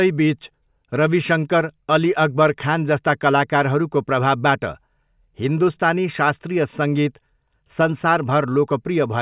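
Nothing in this bit of speech stands out as a technical fault; there's no glitch or dropout anywhere to point to.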